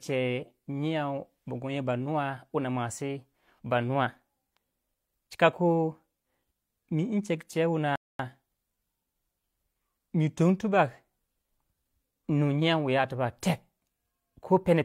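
At 7.96 s the speech drops abruptly into silence and stays there until 8.19 s, then picks up again at exactly the point where it broke off, with nothing skipped or repeated. That is a rebuffering stall: the player exhausted the audio it had already downloaded and simply waited for more to arrive before continuing. No content is lost, but the pause inserts about 235 ms of dead air into the timeline.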